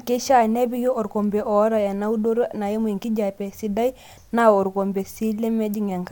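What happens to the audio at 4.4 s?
Nothing goes wrong at 4.4 s; the speech continues there without any audible fault.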